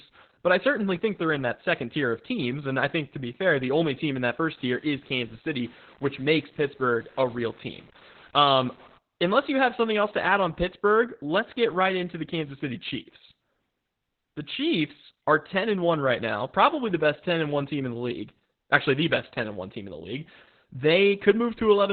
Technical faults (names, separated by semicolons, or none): Opus voice compression; low bit depth without dither